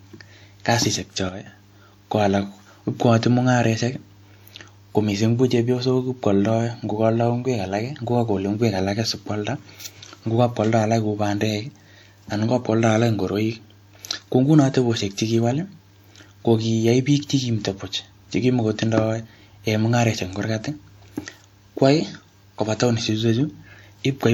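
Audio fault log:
1.29–1.46 s, sudden gain jump: the speech and its background noise fall together by about 8 dB with no fade, then snap back at 1.46 s. The likely cause is a digital gain setting switched between adjacent samples without a ramp, which scales everything at once. On the waveform, the envelope shrinks abruptly into a narrower block with vertical edges. On a spectrogram, that interval is uniformly darker across all frequencies, with sharp boundaries.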